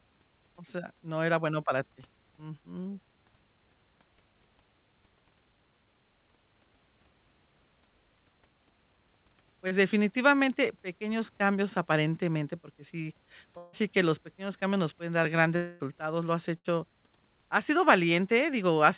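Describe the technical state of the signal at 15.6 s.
At 15.6 s the signal is in a gap, likely a long network dropout, running from 15.56 to 15.83 s, between "cambios nos pueden dar" and "lo has". About 240 ms of audio never arrives. The receiver fills the hole by extending the last sound as a fading buzz or hiss, with no true silence. On a spectrogram this appears as a smeared, repetitive band that fades within the G.711 call path's 4 kHz ceiling. In the waveform the envelope decays smoothly until speech resumes.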